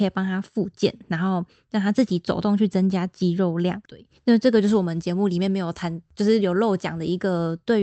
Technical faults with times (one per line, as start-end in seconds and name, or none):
none